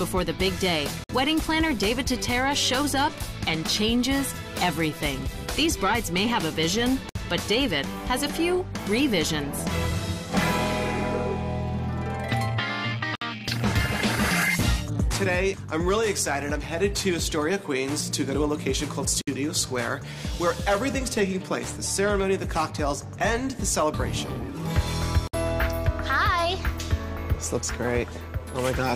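The sound drops out briefly at 1.04, 7.09, 13.15, 19.21 and 25.27 s, every 6 s. Each is a gap at a join of encoded pieces. Silences of about 55 to 60 ms come from untrimmed encoder delay and padding.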